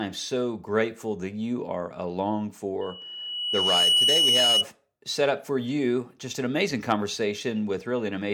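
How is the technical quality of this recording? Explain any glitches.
The recording has one clear fault, a loudspeaker feedback squeal. From 2.81 to 4.66 s, after "that you are along" and before "set up for you", a 2.9 kHz tone swells over about a second to roughly 5 dB above the speech. The microphone is re-amplifying its own loudspeaker, with loop gain exceeding unity at that frequency.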